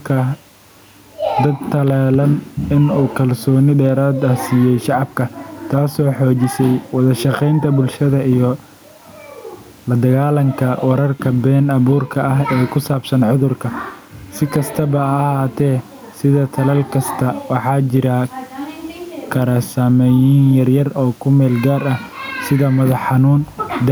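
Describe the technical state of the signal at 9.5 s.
At 9.5 s the speech is caught in gain pumping, which runs through the whole recording: the gain swings by around 10 dB, with the background room noise about 43 dB below the speech, likely from excessive input gain with a fast limiter clamping down.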